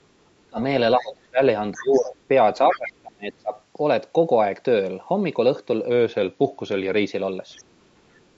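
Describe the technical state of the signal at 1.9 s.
At 1.9 s the talker's speech sags sharply, dropping by roughly 20 dB at its deepest between 1.73 and 2.19 s. This is speech suppressed in double talk, likely because both ends were talking at once. The echo canceller couldn't tell the local talker apart from the loudspeaker echo, so it pulled down everything the microphone picked up for about half a second.

Beneath that dip, from 1.79 to 2.08 s, a faint second voice slips through, sitting far below the talker at roughly 25 dB down. This is the other side's voice leaking through. The far end, playing from the device's loudspeaker, was likely not fully cancelled during that overlap, so some of it remained in the microphone signal. The call's microphone processing, which keeps nothing above 8 kHz, is working as intended.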